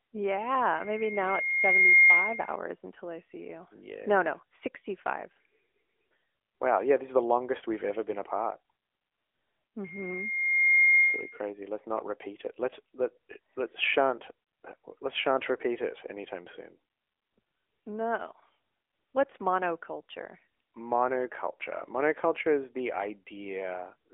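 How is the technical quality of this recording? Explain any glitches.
The recording has two clear problems: the whole clip has the narrow, processed sound of a phone call, and a loud whistle interrupts it near the start.

Throughout, the speech is muffled and buzzy and synthetic, with nothing above about 3.7 kHz and little below 300 Hz. This is the AMR narrowband mobile codec, which rebuilds the voice from a vocal-tract model at a mid-rate setting that fits about 10 kbps. Its damage is plainly audible.

From 0.75 s to 2.59 s, a pure tone at 2.1 kHz swells over about a second until it sits roughly 10 dB above the speech, then stops just before "until I see you". This is loudspeaker feedback squeal: the microphone picked up its own loudspeaker, and the loop gain at that frequency exceeded one.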